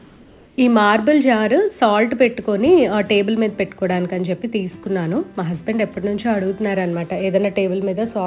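From 0 to 0.58 s, the sender likely stopped transmitting during the pause and the receiver filled it with comfort noise in place of the background. The real room sound, about 31 dB below the loudest parts, becomes a flat, featureless hiss about 1 dB quieter, with nothing above 4 kHz on the narrowband call path.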